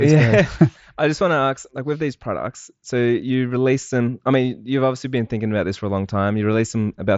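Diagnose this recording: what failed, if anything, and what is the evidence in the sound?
Nothing in the recording points to a failure at any stage. The speech comes through the Bluetooth mSBC headset codec with nothing above about 7.7 kHz and a faint grain on louder passages, which fits that wideband link running at around 61 kbps.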